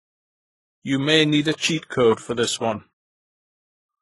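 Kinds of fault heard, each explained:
Transcoding between lossy codecs: the speech most likely passed through a very low-rate HE-AAC stage before MP3, so the MP3 wastes bits re-encoding the earlier artefacts and adds its own. Nothing survives above 11.5 kHz throughout.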